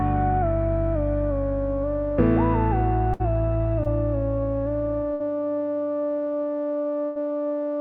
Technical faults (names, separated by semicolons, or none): burst of packet loss; short concealed packet loss